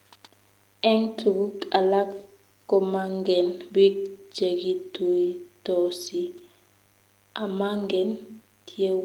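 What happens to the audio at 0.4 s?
At 0.4 s the speech carries a mains buzz, and it is not confined to that moment: it runs through the whole clip. Switching spikes leaking in from a dimmer, rectifier or poorly shielded line repeat twice per cycle of the 50 Hz supply, stacking harmonics of 50 Hz up into the kilohertz range. The result is a steady, raspy buzz sitting well below the speech level, under the lightly coded Opus audio.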